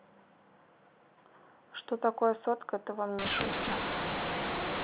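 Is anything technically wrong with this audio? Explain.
Yes. From 3.19 s to the end, the speech turns harsh and gritty, with hiss filling the gaps: mu-law and A-law mixed up, as mu-law telephone samples are decoded as A-law, scrambling levels.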